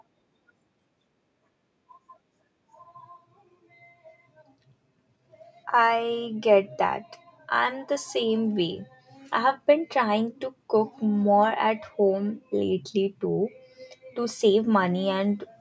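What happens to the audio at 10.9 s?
Nothing goes wrong at 10.9 s: the speech carries on intact through that moment, with only the normal band limit of call microphone processing, which leaves nothing above 8 kHz.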